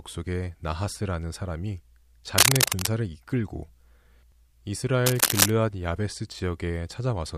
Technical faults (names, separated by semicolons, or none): cable scratch noise